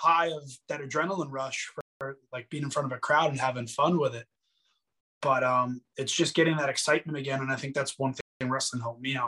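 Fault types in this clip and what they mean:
Gap between chunks: the audio arrives in 3-second segments with silence inserted at each join, so the sound is interrupted rather than lost. Here it is heard as three holes of 200 ms each, at 1.81, 5.01 and 8.21 s, recurring every 3.2 s.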